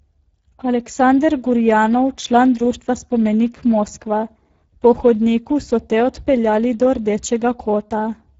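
Speech carries plainly audible Speex codec damage throughout: a hoarse, noisy grain consistent with a low setting near 10 kbps, and nothing above 7.7 kHz. Unlike the swirling of music codecs, the roughness sits inside the starved CELP excitation itself.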